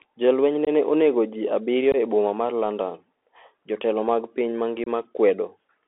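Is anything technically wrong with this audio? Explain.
Yes. The speech has been carried over a Bluetooth CVSD headset codec for its whole length. CVSD encodes each sample as a single up-or-down bit with an adaptive step, which fits a 64 kbps link, and the line passes only about 300 Hz to 3.4 kHz. The result is thin, boxy speech with no top end, a granular hiss under everything, and plainly audible codec damage: s sounds turn scratchy and loud bright moments distort where the step size can't keep up.

There is also unconcealed Bluetooth headset packet loss at three points: 0.65 to 0.69 s, 1.92 to 1.96 s, and 4.84 to 4.87 s. In each, a handful of short voice packets between headset and phone never arrived, and nothing was done to hide the gap. The first two holes are about 19 ms long and the last about 26 ms. Each one is a brief, abrupt dropout with hard edges that can click, and the speech comes back quieter for a moment as the CVSD decoder recovers.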